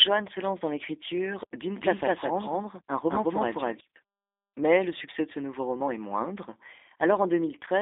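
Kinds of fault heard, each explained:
G.729 codec: the 8 kbit/s VoIP codec rebuilds the speech from a model, so nothing above 3.8 kHz survives and it sounds plainly rough and synthetic.
Doubled audio track: from 1.77 to 3.81 s an equally loud copy trails about a fifth of a second behind, likely from a slower second capture path.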